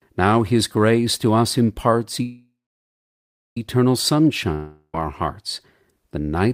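Speech, with two interruptions. After "grace to us imparts", a call audio freeze runs from 2.22 to 3.57 s: a fading buzz, then about 1.04 s of silence, after which speech resumes intact but 1.34 s later, likely from delayed packets. From 4.54 to 4.95 s, just before "our hearts", a long network dropout fades out briefly, then drops about 0.39 s of speech outright, likely from packets that never arrived.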